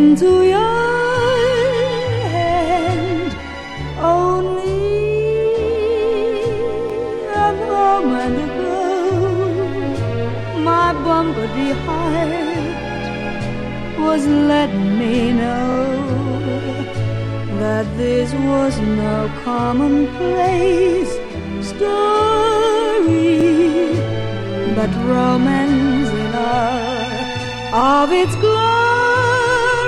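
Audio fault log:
6.90 s, 15.72 s and 23.41 s: repeated buffer. Fresh audio arrived late, so the device replayed its last 23 ms block, which fits a 1024-sample buffer: one extra play at 6.90 and 23.41 s, two at 15.72 s. Hard joins make each a brief stutter, nothing skipped.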